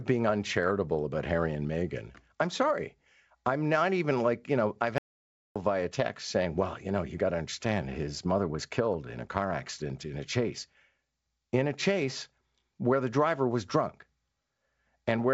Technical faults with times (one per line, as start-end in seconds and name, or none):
4.98-5.56 playback stall
13.69-13.72 bit errors on an ADPCM link